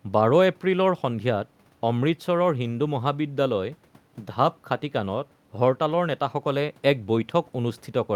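There are no technical faults to place in time order, and the only background is low room noise about 38 dB below the speech, which belongs to the recording itself.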